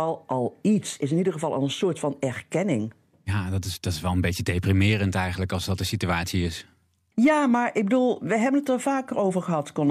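From 7.24 to 7.98 s the speech peaks pick up a brief gritty crackle, the sound of hard clipping. For that stretch the level runs about 2 dB past what a stage could pass, so the loudest peaks are cut flat, adding harsh high harmonics.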